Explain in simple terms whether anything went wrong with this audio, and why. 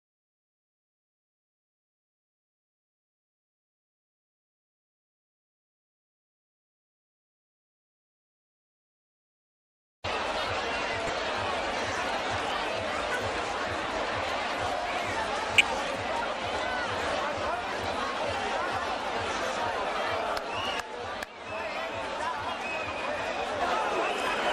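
Throughout the clip the sound has been squeezed too hard by a coding system, most likely MP2 compression of the kind used for digital radio. That system splits the sound into many narrow frequency strips and shares out a limited budget of data among them. With too little to go round, the top strips get switched off and the rest are stored roughly. The result here is plainly audible: a dull, muffled sound with a gurgling, grainy roughness.

On top of that come three short bursts of DAB burbling, at 10.79 to 11.10 s, 13.84 to 13.95 s and 15.54 to 15.61 s. These happen when a weak radio signal lets a few corrupted bits slip through error correction into the compressed data. Individual frequency strips then get short blips of noise, giving brief bubbling or watery blips over the sound. The first burst is the longest, and the last is the harshest.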